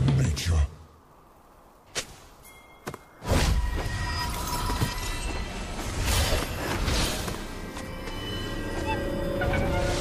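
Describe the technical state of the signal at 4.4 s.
At 4.4 s the signal is intact, with no dropout, clipping, glitch or other fault audible at that point.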